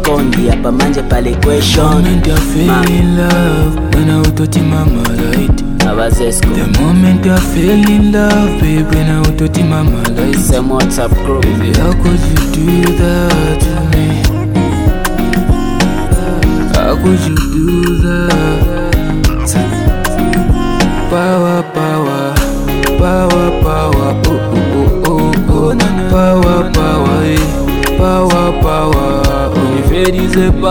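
From 17.28 to 18.28 s, channel delay (comb filtering): one channel lags the other by about 0.7 ms, and the mono sum cancels at evenly spaced frequencies, the first around 700 Hz. For that second the sound turns hollow and phasey.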